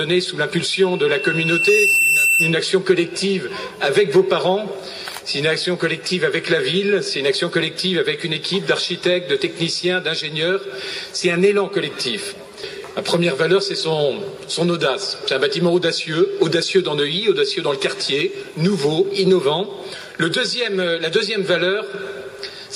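From 0.73 to 2.69 s, a loudspeaker feedback squeal sounds at 2.7 kHz: the microphone picks up its own loudspeaker and the loop gain exceeds one. Unlike a steady whistle, the tone swells over about a second and a half, ending a few decibels above the sound.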